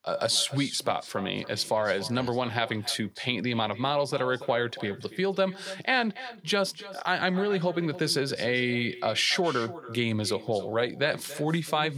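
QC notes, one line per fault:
Throughout: echo with no canceller. Every phrase returns about a third of a second later as a distinct, thinner copy some 15 dB down: the far end's loudspeaker feeding its microphone unremoved. Unlike room reverberation, it is a separate delayed repeat, not a smooth decaying tail.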